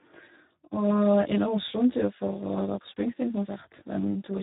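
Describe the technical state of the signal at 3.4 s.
At 3.4 s, channel delay (comb filtering) is active, as it is across the whole clip. One channel lags the other by roughly 20 ms before the mono sum, so the shared content cancels at evenly spaced notches. These start near 30 Hz and repeat densely through the spectrum, giving the speech a rough, slightly doubled quality.

The Speex codec damage is also present at that moment and throughout. Its CELP coding spends very few bits on the excitation signal, which fits a low setting around 8 kbps. The speech sounds hoarse, noisy and edging toward robotic, and nothing remains above 3.8 kHz, leaving it muffled and narrowband.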